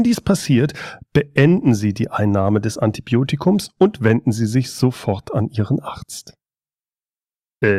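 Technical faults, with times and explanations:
No technical faults are audible anywhere in this speech recording.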